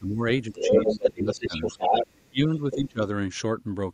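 Speech suppressed in double talk, 0.00 to 0.23 s: the talker's level sinks by roughly 15 dB for about a fifth of a second, most likely because the echo canceller took simultaneous talk on both sides for its own loudspeaker echo and turned the microphone down. It happens again from 0.49 to 1.61 s, with shallower dips of around 10 dB adding up to about 0.7 s.

Other side's voice leaking through, 0.54 to 2.15 s: a second voice sits in the signal at roughly the same loudness as the talker. It is likely the far end playing from the loudspeaker and not fully cancelled before reaching the microphone.

Speech suppressed in double talk, 2.16 to 3.01 s: the worst instance, with drops of around 40 dB that come close to silence and total about 0.7 s.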